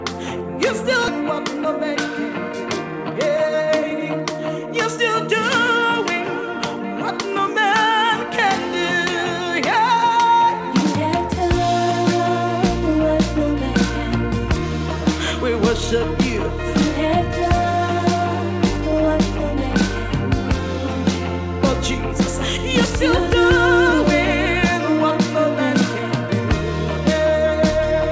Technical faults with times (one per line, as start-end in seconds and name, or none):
1.08-1.10 skip ahead
1.22-1.67 jitter buffer speed-up
2.53-5.82 jitter buffer speed-up